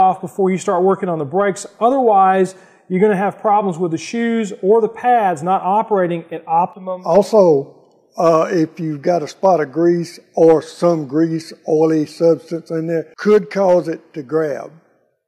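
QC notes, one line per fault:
No faults found. Nothing in the audio calls for a note.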